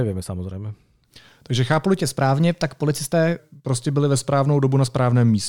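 From 2.01 to 3.39 s, a wrong sample rate fault plays the audio faster than it was captured, with no conversion, which fits 44.1 kHz material played at 48 kHz. Speech runs 1.09 times fast and about 1.5 semitones high, slightly quicker and higher, starting at "prostě byli ve".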